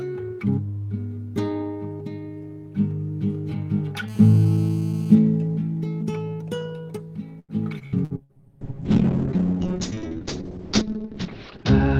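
From 4.08 to 5.15 s a GSM phone buzz sits about 26 dB below the signal: a steady, raspy 217 Hz buzz with many harmonics from rectified burst transmissions during a call.

Between 7.39 and 8.32 s, repeated packet loss gives choppy, robotic sound. Five gaps, the longest 93 ms, are patched by extending earlier audio, concealing about 31% of the span.

From 8.17 s to the end, a call bitrate drop makes the audio rougher, with the top cut from 20 kHz to 8 kHz. This points to the encoder falling from roughly 32 to 6 kbps, and it does not recover.

From 8.18 to 8.50 s, a jitter buffer slow-down repeats small segments to add 51 ms, so the sound plays at 87% speed without changing pitch.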